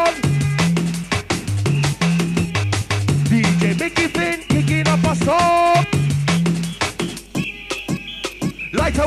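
No technical fault can be heard anywhere in the audio, and the signal stays steady and intact throughout.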